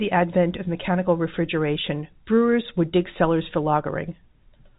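No technical faults are audible.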